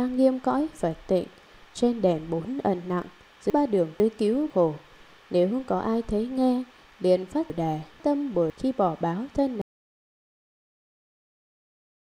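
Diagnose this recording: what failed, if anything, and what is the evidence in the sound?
Chunks out of order at 3.5–4.5 s and 7.5–8.5 s: a 500 ms buffer block plays one slot late, leaving a jumbled passage.

Audio dropout to silence from 9.62 s to the end: the sound cuts to silence without room tone, likely from input lost while recording continued.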